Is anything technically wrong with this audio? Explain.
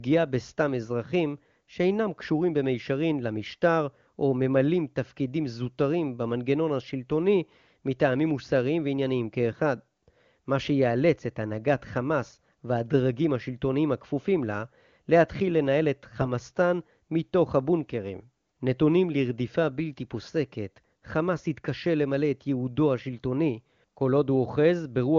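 No, nothing is technically wrong with this speech: it comes through the AMR wideband (HD Voice) codec at a rate consistent with its top 23.85 kbit/s mode, where any coding damage is faint at most.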